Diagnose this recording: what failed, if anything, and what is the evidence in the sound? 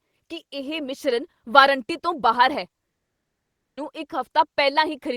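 At 2.90 s the speech stops dead and the line goes silent for 0.87 s, resuming at 3.78 s partway along, with that stretch of speech simply gone rather than delayed. This is most likely a long network dropout. No audio reached the receiver for nearly a second, so the gap was filled with silence instead of the lost speech. When packets arrived again, playback picked up from the current point and skipped what was never delivered.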